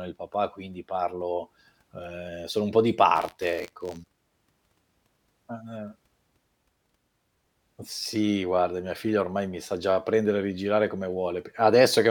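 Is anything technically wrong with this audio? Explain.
Yes. From 3.15 to 4.19 s there is buffer tearing: a robotic buzz at 86.1 Hz, which fits a 512-sample buffer, riding on the speech. Writer and playback reader have slipped, so a small sliver of each buffer replays audio about 40 ms old between hard joins.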